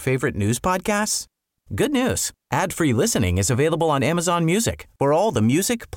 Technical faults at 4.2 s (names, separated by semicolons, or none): none